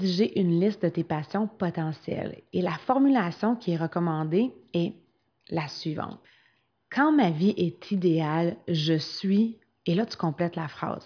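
No technical faults can be heard anywhere in this recording. The speech runs without a break or disturbance in the signal.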